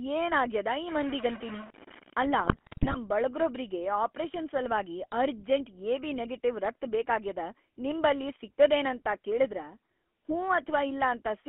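The whole clip runs through the GSM full-rate codec, and the damage is plainly audible. Everything sits in a narrow telephone band, roughly 250 Hz to 3.4 kHz, so there's no air on top and not much body underneath. The speech has that buzzy, gravelly edge you get when the vocal tract is rebuilt from a thinned-out pulse excitation, which is consistent with the 13 kbps full-rate coder.

Right after "ಆಗ್ಯಾದ ಈ", from 0.88 to 2.26 s, a distortion clamps onto the speech. It sounds like a stuck bit. When one bit of each sample is held at a fixed value, about half the samples get knocked off by that bit's weight in a pattern that follows the waveform, and that's the distortion riding on everything here. The quiet moments in that stretch fill with noise too, which is likely a converter or data-line bit pinned high or low.

Almost immediately after, from 2.38 to 2.97 s, you get GSM bit errors. The speech breaks into squawks, pops and gargling for a bit over half a second. 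That's what happens when corrupted filter, pitch or gain parameters reach the decoder and warp the spectrum or spike the level frame by frame. The density of the glitches points to an error rate of around 3%, hitting roughly thirty frames in a row.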